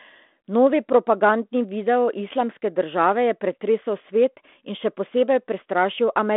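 Nothing stood out on listening to this speech clip, which carries the narrow band of a G.726 telephone path at 32 kbit/s, with nothing above about 3.8 kHz.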